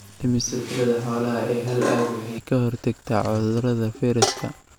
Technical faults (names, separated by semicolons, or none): switch to a distant microphone